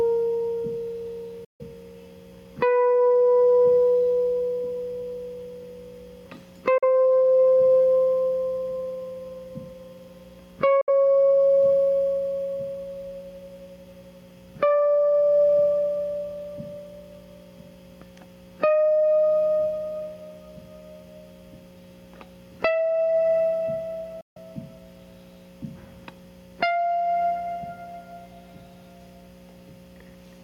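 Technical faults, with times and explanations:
Throughout, gain pumping: the gain swings by around 15 dB. That's likely input gain set far too hot, with a fast limiter clamping down on every peak, so everything sounds squashed.
1.44–1.61 s, 6.78–6.84 s, 10.81–10.89 s and 24.21–24.37 s, Bluetooth dropout: the music cuts out for about 150, 43, 64 and 150 ms, then comes back further along as if it had kept playing. Likely a few late wireless packets that got dropped.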